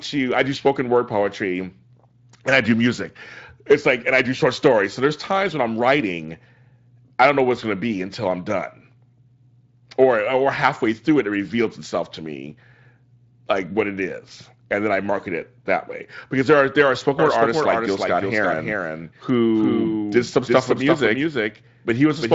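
A second, slower capture path, or an edit holding two copies out of step, is the likely cause of a doubled audio track starting at 17.19 s, right after "there are there are", and running to the end. A full-band copy of the speech trails the original by roughly 300 ms at about 5 dB lower. With no decay or room colour, it sounds like a flat echo stuttering behind every syllable. It cuts in abruptly, heard through the Speex codec's band that stops near 7.6 kHz.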